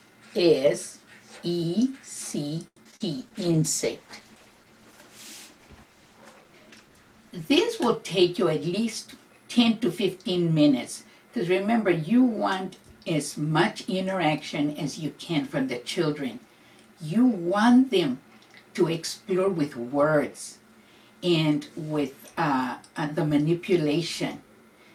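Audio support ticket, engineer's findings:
Repeated packet loss (robotic sound), 2.67–3.02 s. Choppy, metallic stretch of several short holes patched by extending prior audio. Longest hole 90 ms, and concealment covers about 43% of the span. Spectrogram: smeared, repeated frames with abrupt edges; waveform shows looped, periodic segments.

Call bitrate drop, 3.14–7.71 s. Audio turns rough, watery and muffled for about 4.5 s. This fits the encoder being pushed from 64 to 16 kbps after a bandwidth estimate fell, producing coarser coding and a lowpass. Spectrogram: high band abruptly missing above a flat ceiling; waveform shows little visible change.

Jitter buffer speed-up, 8.53–9.34 s. Audio hurried, about 8% faster, pitch unchanged. The receiver trimmed pitch-period chunks, around 70 ms in total, to drain excess buffered delay. Waveform: periodic cycles missing at splice points; spectrogram: events slightly compressed in time, harmonics unshifted.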